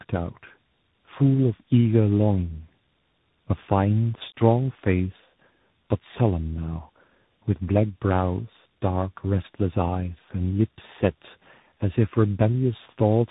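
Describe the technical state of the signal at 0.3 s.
At 0.3 s the speech sounds rough, muffled and warbly, with nothing above 3.8 kHz. This is tandem speech coding, present throughout the clip. The character fits a low-rate narrowband coder like AMR-NB followed, after a passage through G.711 A-law, by a CVSD delta-modulation coder. With two speech codecs in a row, the second re-encodes the first one's already degraded output, compounding the distortion and dulling.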